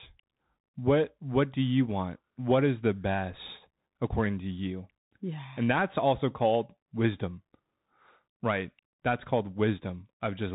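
Speech, and the whole thing's been through a Bluetooth CVSD headset codec: nothing above about 3.8 kHz, scratchy s sounds, granular hiss underneath, which fits 64 kbps one-bit delta coding.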